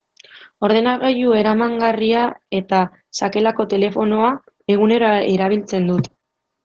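The speech sounds muffled and slightly hoarse and robotic from start to finish, with nothing above about 8.7 kHz. That is Opus voice compression: the SILK coder limits the band to wideband and codes the excitation coarsely, which fits a low bitrate around 12 kbps.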